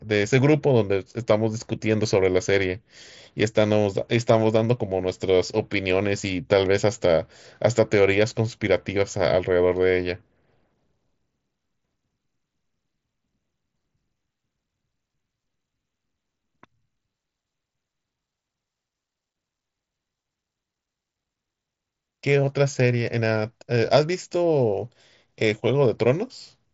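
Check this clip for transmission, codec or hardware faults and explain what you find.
No transmission, codec or hardware faults stand out in this speech: it comes through an mSBC Bluetooth headset link whose wideband limit leaves nothing above about 7.7 kHz, with only the light graininess that codec adds on louder passages.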